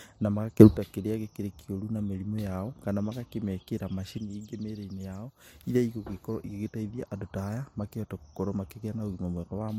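At 0.60 s the speech and its background noise leap up together by about 18 dB, holding there until 0.77 s; from 4.18 s to 5.63 s both drop by about 6 dB instead. Each is a sudden gain jump, likely a digital level setting applied between one sample and the next with no ramp. Unlike compressor or AGC pumping, which swells or sags over tens of milliseconds, each step here is instantaneous at both ends.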